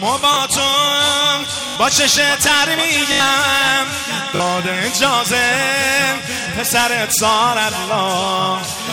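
Repeated buffer stutters occur at 0.34, 1.68, 3.12, 4.36 and 6.44 s. Fresh audio arrived late, so the last block replayed with hard joins, one to four extra times. Each repeat lasts about 20 ms, which fits a 20 ms buffer. The longest stutters are at 1.68 and 3.12 s.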